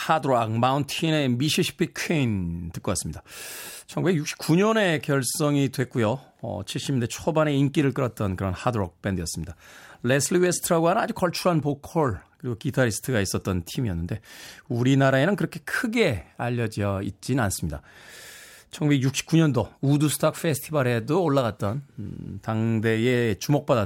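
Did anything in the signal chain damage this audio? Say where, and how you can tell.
No, nothing along the chain seems to have hurt this speech; it all sounds like it came through fine.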